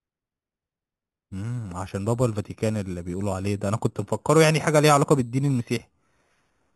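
Speech, carrying imaging from sample-and-hold upsampling for its whole length: each original sample was simply repeated with no smoothing, which fits audio first captured at 8 kHz and raised to 44.1 kHz. The result is a bright, metallic fizz about 16 dB below the speech that rises and falls with it. A spectrogram shows the 0 to 4 kHz band mirrored into 4 to 8 kHz, with the copy's harmonics moving opposite to the pitch and further copies stacked around each multiple of 8 kHz. Zoomed in, the waveform shows small stair-steps.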